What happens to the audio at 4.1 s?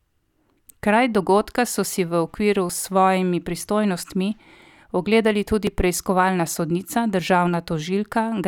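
Nothing goes wrong at 4.1 s; the speech carries on intact through that moment.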